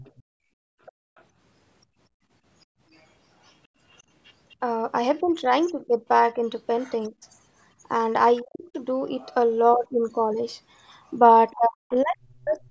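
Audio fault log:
0.0–1.23 s, 3.47–4.54 s, 8.39–8.59 s, 11.5–11.55 s: other side's voice leaking through. A faint second voice sits some 30 to 35 dB under the talker, likely loudspeaker playback that the echo canceller failed to fully remove from the microphone signal.
0.22–2.8 s: background gated by the echo canceller. The room sound drops out intermittently, about 31 dB at its deepest, for about one and a half seconds in total. The canceller clamps the microphone while the loudspeaker plays and releases it afterwards.
5.21–7.24 s, 8.41–8.75 s, 11.55–12.71 s: speech suppressed in double talk. The talker's level dips and breaks up, around 20 dB down in the first span and roughly 40 dB in the later two, likely because the canceller mistook overlapping near-end speech for echo and attenuated both.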